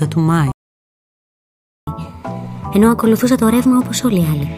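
The player most likely ran short of data or had its thread blocked, a playback stall that silences the audio from 0.52 s to 1.87 s, a gap of about 1.36 s before the sound resumes. To recover that lost time, the player then resamples its backlog as catch-up at higher speed. From 1.87 s to the end the audio runs at 1.15 times normal speed and its pitch rises by about two semitones.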